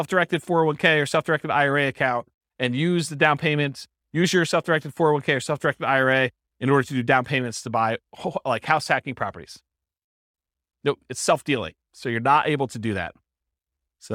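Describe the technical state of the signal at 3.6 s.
At 3.6 s the speech signal is intact, with no audible fault at that point.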